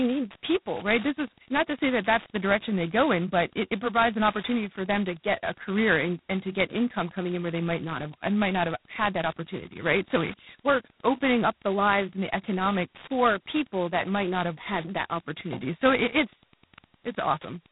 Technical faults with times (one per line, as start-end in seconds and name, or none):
0.00-17.71 G.726 ADPCM